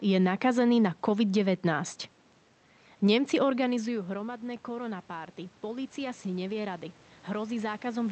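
From 3.68 s to the end at 8.12 s, automatic gain rising is heard. The talker moves back around 3.5 s, dropping the input about 15 dB. The gain control then slowly lifts its gain, so voice and room noise swell together.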